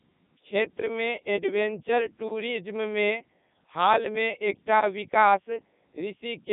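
Throughout, the speech carries heavy Codec 2 vocoder damage. It is resynthesised from sine waves driven by pitch and envelope, sounding robotic and buzzy at a rate fitting 3.2 kbit/s. A spectrogram shows rigid harmonic stripes between 150 Hz and 3.7 kHz, nothing above 3.8 kHz.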